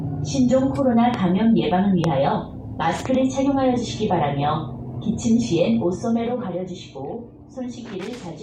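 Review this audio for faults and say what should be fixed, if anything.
Two sharp loud pops, at 1.14 to 1.16 s and 2.04 to 2.06 s, jump about 15 dB above the sound, which continues underneath. They are likely voltage pulses from a plug, switch or static discharge. To prevent them, secure connectors, avoid switching equipment while recording, and use grounded, static-free cabling.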